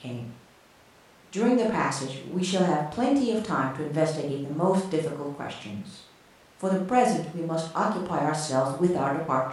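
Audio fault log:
No fault is logged for this speech clip.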